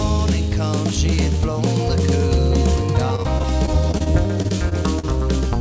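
From 3.16 s to 5.05 s there is repeated packet loss, giving a robotic sound. Packets went missing again and again. Each hole was covered by stretching the last bit of sound forward. About fifteen short holes follow one another closely, the longest near 39 ms. Patching covers roughly 290 ms, about 15% of the stretch. The sound turns choppy, with small pieces gone. The band stops at 8 kHz, which fits G.722 at 64 kbps.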